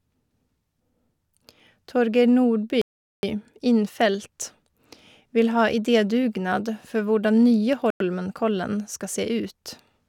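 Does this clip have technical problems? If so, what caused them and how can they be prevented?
Yes. Bluetooth stalls at 2.82 to 3.23 s and 7.90 to 8.00 s cut the speech to silence for about 0.42 s and 0.1 s. Each is likely radio interference starving the headphones' buffer until resent packets arrived. Keeping the phone close, with a clear line of sight and away from busy Wi-Fi, prevents this.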